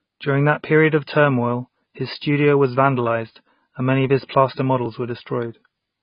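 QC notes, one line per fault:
Throughout, AAC compression damage. Nothing sounds above 5.1 kHz. The speech is dull and heavily smeared. This likely comes from a low-bitrate AAC-LC encode, near 16 kbps.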